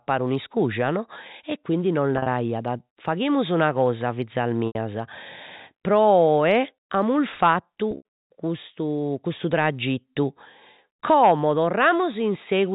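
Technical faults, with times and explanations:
2.16, 4.67 and 7.91 s, packet loss with pitch repetition: after "no e quindi nos" and "faghimus una cosa fizas", 80 to 100 ms of audio drops out, and the last pitch period is looped over the gap, so you hear a brief buzzy hold at 2.16 s, while at 4.67 and 7.91 s the repeat fades into silence before the speech cross-fades back.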